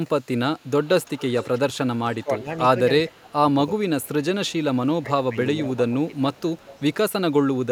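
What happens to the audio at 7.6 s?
Nothing goes wrong at 7.6 s: the audio runs on cleanly through that moment with no dropout, click or distortion.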